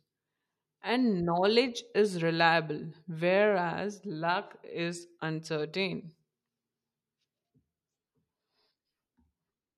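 No audible technical faults anywhere in this recording.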